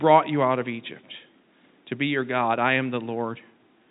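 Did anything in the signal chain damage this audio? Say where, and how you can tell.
No, nothing in this speech stood out as damage from any stage of the chain when I listened.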